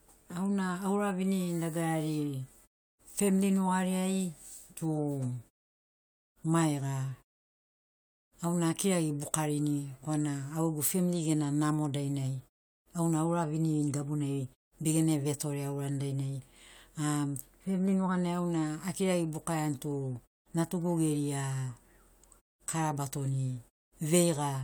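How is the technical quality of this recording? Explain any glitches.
Nothing in the recording stood out as a technical problem on listening.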